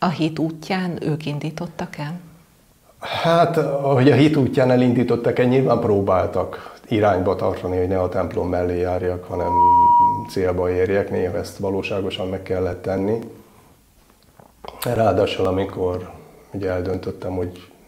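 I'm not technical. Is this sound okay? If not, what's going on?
No. From 9.30 to 10.40 s a single high, steady whistle near 960 Hz swells up over about a third of a second. That is loudspeaker feedback squeal: the microphone picks up its own loudspeaker, and the sound keeps looping and growing louder.

From 12.73 to 17.68 s there are regular little ticks, about four a second, every 0.248 s, around twenty in all. These are periodic USB or driver dropouts. Something in the computer briefly interrupts the audio, and each time a tiny sliver, roughly 2 ms, is skipped.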